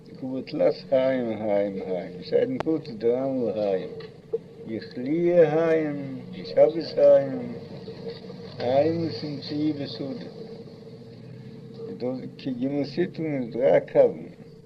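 At 2.60 to 2.63 s a single loud pop stands well above the surrounding level, likely from a plug, switch or static discharge adding a voltage pulse. Unlike a dropout, nothing goes missing: the sound carries on beneath the brief thump.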